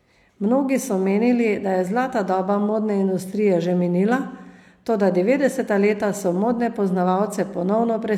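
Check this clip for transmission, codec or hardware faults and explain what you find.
Nothing faulty turns up anywhere in this recording.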